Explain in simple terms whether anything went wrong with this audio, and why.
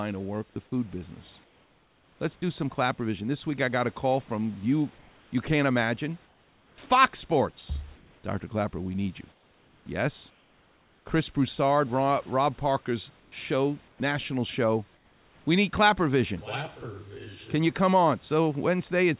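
Yes, a few things went wrong, all tied to the call's voice detector. This system likely stops sending audio whenever it thinks nobody is talking and lets the receiving end fill the gap with made-up noise.

Comfort noise in place of the background: during the pauses at 1.44–2.2 s, 4.98–5.32 s, 7.96–8.24 s, 9.32–11.06 s, 13.2–14.0 s and 14.94–15.46 s, the real room hiss is swapped for a smooth, even, artificial hiss. In a few of these gaps it is slightly quieter than the real background. No speech is lost here. Only the texture of the background changes. That is what separates it from the next two faults.

Sound dropped by the voice detector: at 0.54–0.56 s a tiny piece of the speech vanishes. The detector likely mistook a quiet sound for silence and briefly stopped sending, so for a moment there is only fill noise where the speech should be. It happens once and is very brief, unlike the repeated switching below.

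Sound chopped by the voice detector: between 6.26 and 6.9 s the detector likely flipped between sending and not sending more than once. Quiet parts of the speech keep getting cut and replaced, so the speech sounds choppy.

The speech also sounds narrow, like a phone call, because nothing above 4 kHz gets through.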